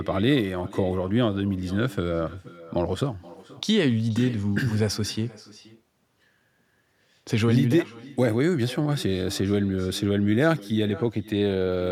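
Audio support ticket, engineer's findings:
Echo with no canceller, present throughout. Every phrase returns as a quieter, thinner copy, about 19 dB down, roughly half a second late. Far-end loudspeaker feeding its own microphone. No echo cancellation removing it before the return path.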